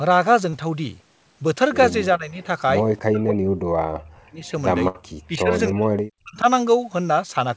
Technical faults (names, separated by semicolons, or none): short concealed packet loss; speech suppressed in double talk; burst of packet loss